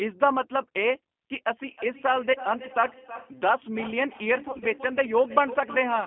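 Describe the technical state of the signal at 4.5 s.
Packet loss concealed by the speech codec runs from 4.48 to 4.65 s, so 4.5 s falls inside it. About 80 ms of audio is missing, scattered across a 140 ms stretch, with no gap longer than 30 ms. That pattern points to roughly eight lost 10 ms frames. In each gap the decoder repeats its last pitch and filter state at falling gain. The result is brief buzzy, tonal smears and weakened sound that stays degraded for tens of milliseconds or more past each gap.

Feedback echo between two devices is also active, from 1.67 s to the end. A second device in the room replays the call audio into this microphone, and the local echo canceller cannot remove it. The sound therefore returns at a fixed interval of roughly 0.3 s, at about 15 dB below the direct sound. Each repeat comes back thinner and more ringing than the one before.

Underneath both, the G.729 codec is audible throughout. 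The band is confined to 200 to 3400 Hz, which fits an 8 kbit/s G.729 line. The codec rebuilds the signal from a vocal-tract filter and a sparse pulse excitation. That gives a plainly rough, synthetic texture. The call microphone processing removes only the lowest bass, as expected.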